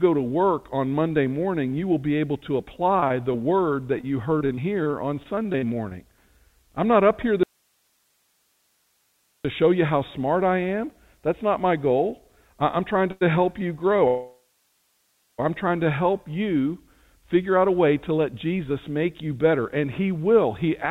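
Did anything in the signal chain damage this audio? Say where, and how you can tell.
Yes. From 3.0 to 5.93 s the sound turns choppy, with a rapid run of short holes, none longer than about 37 ms. This is repeated packet loss (robotic sound), a network-stage fault. Packets kept going missing, and each hole was patched by stretching the last bit of sound. Roughly a third of a second was concealed this way, about 11% of that stretch.

From 7.43 to 9.45 s the sound cuts out abruptly. For about 2 s only hiss remains, about 45 dB below the normal level, and then the signal snaps back mid-flow. This is an audio dropout to a faint residue. The sudden edges rule out a pause or fade. The likely cause is that the signal was lost upstream while the later stages of the path stayed live, passing their own noise.

At 13.11 to 13.23 s, and again from 14.08 to 15.40 s, the sound hangs on a fading continuation of the last sound. 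In the longer case it falls to silence for about 0.9 s before resuming exactly where it stopped. This is a call audio freeze at the jitter buffer. Delayed packets likely let the buffer run empty, so the receiver extended the last sound. Nothing is missing, but about 0.1 s and 1.3 s of delay were inserted.

From 17.02 to 20.64 s the speech runs hurried, at about 107% speed with unchanged pitch. This is a jitter buffer speed-up in call processing. With too much audio queued, the receiver repeatedly cut out pitch-period-sized slices to shrink its delay, removing about 0.3 s in total. The G.711 codec's 4 kHz top end is audible throughout the clip.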